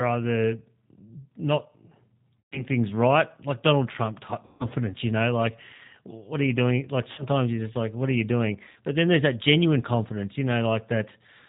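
G.729 codec damage runs through the whole speech clip: nothing above 4 kHz survives, and the voice has the rough, slightly synthetic texture typical of an 8 kbit/s codec. VoIP packet loss concealed by the speech codec hits at 2.41 s, 4.45 s, 7.12 s and 8.70 s. The decoder stretches the last pitch and filter over about 120, 150, 60 and 60 ms of missing audio, producing a fading buzzy tone or coloured noise, and the voice stays weak briefly after recovery.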